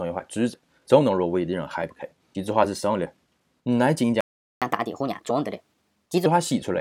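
At 4.21 s the sound just drops out for about 410 ms, a playback stall, likely the player running dry or its thread getting blocked, until 4.62 s. Right after, from 4.62 to 6.26 s, there's catch-up at higher speed: the backlog plays at 1.25 times speed, so pitch jumps up around four semitones before settling back.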